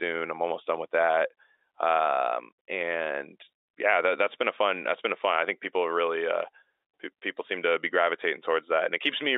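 Nothing's wrong with this speech clip; it's simply the usual G.711 telephone coding doing its job, with the sound held to the familiar phone-line band of about 300 Hz to 3.7 kHz.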